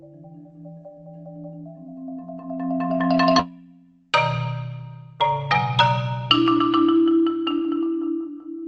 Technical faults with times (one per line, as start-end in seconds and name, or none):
3.39-3.41 skip ahead
3.49-4.45 jitter buffer speed-up